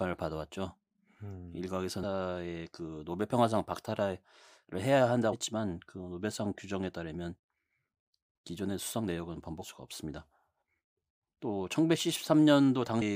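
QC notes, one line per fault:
2.02 s, 5.32–5.34 s, 9.62–9.64 s and 13.01–13.03 s: damaged data in a compressed stream. Corrupt bytes throw the decoder off frame sync while it hunts for the next header, leaving a brief chirp or blip in the speech.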